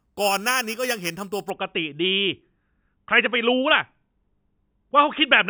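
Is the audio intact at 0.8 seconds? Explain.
No, at 0.8 seconds you're inside a stretch of imaging from sample-and-hold upsampling that runs from the start to 1.5 s. The speech was brought up from 8 kHz to 48 kHz by just repeating each sample with no smoothing, so a mirrored copy of the voice band lands between 4 and 8 kHz, about 10 dB under the speech. It comes across as a bright, metallic fizz riding along with the voice.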